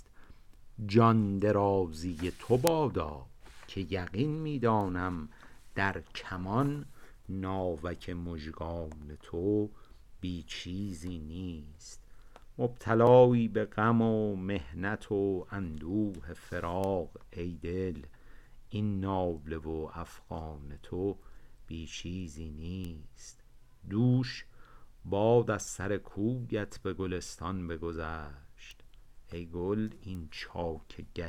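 At 2.67 s a bit error spike appears. One bit flipped in a sample or two, so the value jumped by a power of two and snapped straight back. It is heard as a single sharp tick, bright and broadband, with no relation to the sound around it. A second spike follows at 4.81 s, a one-sample event with the same dry tick.

At 13.07 s comes a block of digital silence. The output dropped to zero for about 1.33 ms, most likely because the buffer was not filled in time. The length fits a 64-sample block. The cut has no fade in or out. At this length it is heard as a brief tick rather than an audible hole.

Bit error spikes return at 16.84 s, 22.85 s, 28.71 s and 30.15 s. The one at 16.84 s spans two samples. The others are single samples. Each is the same isolated tick, sharp and unrelated to the sound.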